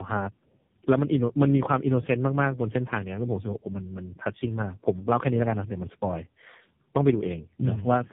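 A speech recording runs throughout with tandem speech coding. Nothing is heard above 3.7 kHz. The voice sounds rough, muffled and warbly, which fits about three low-bitrate speech codecs in a row. Each stage recoded the previous stage's damage, so the artefacts stacked.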